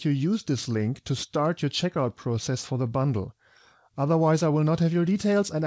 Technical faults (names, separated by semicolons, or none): none